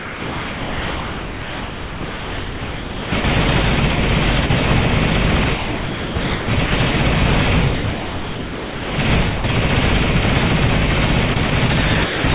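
From 0.00 to 3.24 s the sound is chopped by the voice detector: the transmission repeatedly switches between sending and not sending, so about 3.2 s of that stretch is replaced by synthetic background. The sender's voice activity detection is the likely cause, with comfort noise inserted whenever the detector decides the input is only background. The result is a choppy onset.

At 3.96 to 3.98 s and again at 4.46 to 4.50 s, the sound drops out for 20 ms and then about 30 ms. This is sound dropped by the voice detector, which most likely judged quiet portions to be background and stopped sending. Each gap is filled with steady comfort noise before the signal resumes.

The same chopping returns from 5.44 to 6.94 s, where close to 1 s is replaced, and from 7.74 to 8.98 s, where about 1.2 s is replaced. Both passages have the same on-off texture, with real sound giving way to flat synthetic noise more than once.

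At 9.36 to 9.44 s an 80 ms piece of sound is dropped and replaced by comfort noise.

A brief chopped section at 11.34 to 11.52 s substitutes about 40 ms.

From 12.04 to 12.24 s a 200 ms drop near the end of the clip leaves comfort noise in place of the sound.

Throughout, nothing is present above 4 kHz, which fits a narrowband call codec such as G.711 on the call path.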